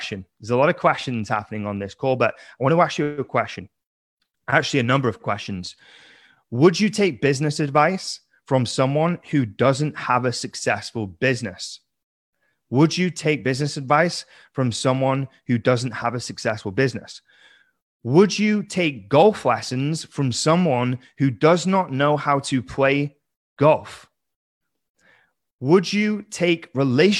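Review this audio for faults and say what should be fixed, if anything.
No faults found; nothing to fix.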